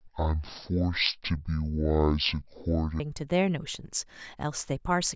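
Wrong sample rate from 0.0 to 3.0 s: the speech runs at half speed and drops a full octave, 12 semitones, because the samples are clocked out at half the rate they were captured at without conversion. That fits 32 kHz audio played at 16 kHz, making the speech sound slow and deep.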